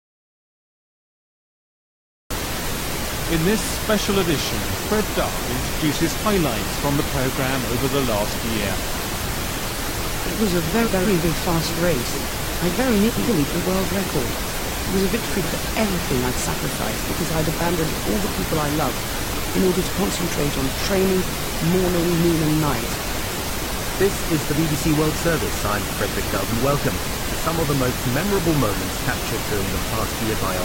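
The audio opens in an audio dropout to silence lasting until 2.31 s: silence without room tone, unlike a quiet pause, most likely from a lost input. At 9.05 to 9.44 s, 10.86 to 11.24 s and 13.09 to 13.47 s, frames out of order swap two roughly 186 ms halves, which fits four-frame blocks. Each swap gives a garbled flutter, but unlike a dropout no time is lost.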